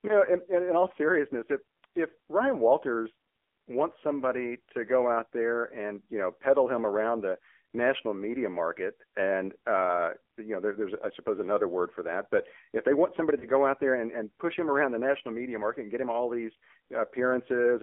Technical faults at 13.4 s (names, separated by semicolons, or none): AMR narrowband mobile codec; lost AMR speech frames